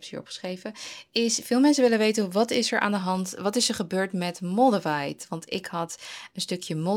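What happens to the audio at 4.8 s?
Nothing goes wrong at 4.8 s: the speech continues cleanly through that point with no dropout, click, distortion or other audible fault.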